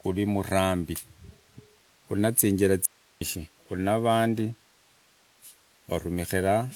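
From 2.85 to 3.21 s the speech drops out abruptly for 360 ms, leaving only faint hiss roughly 35 dB down: an audio dropout to a faint residue, likely a brief signal loss. The waveform shows a sudden near-flat gap, and the spectrogram a broadband noise floor.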